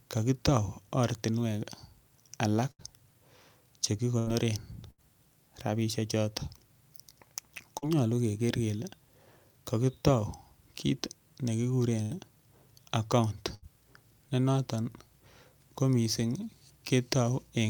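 Speech recording with two related network faults. The main one is a burst of packet loss, heard five times: 2.71 to 2.82 s, 4.19 to 4.30 s, 4.91 to 5.01 s, 12.02 to 12.14 s and 13.55 to 13.65 s. Each time about 80 ms of the stream never arrived in time, so the receiver stretched the last bit of sound it had for roughly 72 to 86 ms, fading it down, before jumping ahead to where the audio resumes, with the stretch in between simply gone. There's also one short concealed packet loss at 7.78 to 7.85 s, a smaller hole of about 40 ms that the decoder papered over by extending the preceding sound for about 42 ms and blending back in, so it comes across as a brief smear or wobble rather than an obvious dropout.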